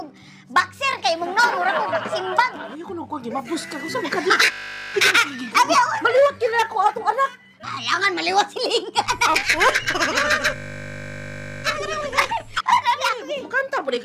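A system hang loop appears at 4.52–4.94 s and again at 10.56–11.64 s: a 20 ms slice repeats exactly, giving a steady 50 Hz buzz while playback freezes. A dropped buffer (overrun) at 6.94 s is heard as a jump where the sound skips ahead, likely because the hardware overwrote samples before they were read, losing around 10 ms.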